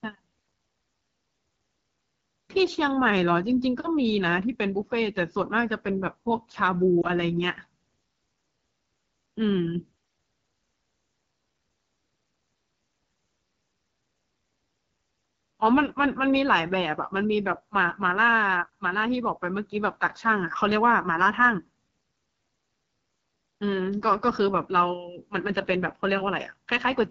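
Throughout, the AMR wideband (HD Voice) codec leaves speech rough and raspy, consistent with a low 8.85 kbit/s rate. A spectrogram shows detail ending near 6.4 kHz with hazy noise above.

At 7.01 to 7.06 s, one lost AMR speech frame causes a brief dip or warble as the decoder repeats prior settings with falling gain. The waveform shows a short sag in amplitude.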